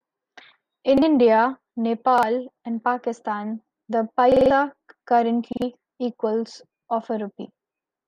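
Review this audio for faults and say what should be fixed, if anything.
The speech stutters four times from a repeated buffer. The same 46 ms piece plays twice at 0.98 to 1.02 s and again at 2.18 to 2.23 s. At 4.32 to 4.51 s it plays five times, and at 5.53 to 5.62 s three times. Each repeat has a hard join. The length fits a 2048-sample buffer. New audio arrived late, so the device replayed the last block, losing roughly 50 to 200 ms of speech. A larger buffer or steadier feeding of the output device would prevent it.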